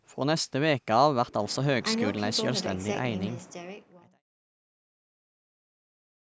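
No technical faults can be heard in this speech clip.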